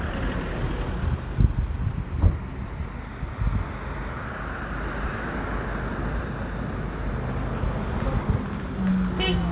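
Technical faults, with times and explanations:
No technical faults heard.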